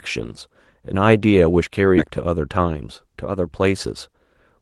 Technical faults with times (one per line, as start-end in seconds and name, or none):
1.97-1.99 skip ahead